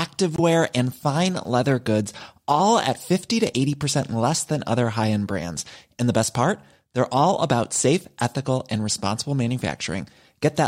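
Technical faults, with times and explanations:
0.36–0.40 s, Bluetooth dropout: a short hole of silence just before "and fine leather goods", with speech resuming as if it had played on, which fits about 21 ms of audio lost in a single frame, likely over the wireless link. The waveform shows a flat gap, and the spectrogram shows a thin blank vertical stripe.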